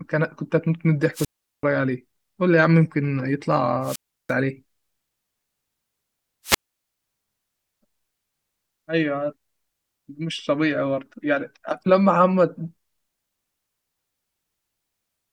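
At 1.13 s the speech gives way to a brief swell of hiss, then a hole of near silence of about 0.39 s, with the voice back by 1.63 s. The same pattern recurs from 3.82 to 4.34 s, muted for about 0.34 s, and from 6.44 to 7.02 s, the longest gap at about 0.47 s. Each is a wireless microphone squelch dropout: the FM radio signal fades, noise rises, and the receiver's squelch shuts off the output until reception recovers.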